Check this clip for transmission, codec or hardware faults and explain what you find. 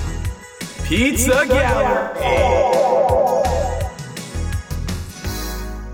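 Two dropouts from lost codec data. AAC frame loss with concealment at 1.97–2.25 s and 4.95–5.15 s: the decoder rebuilt the missing 171 ms and 128 ms (likely four and three frames) from the last good spectrum, leaving smeared, noisy or phasey patches.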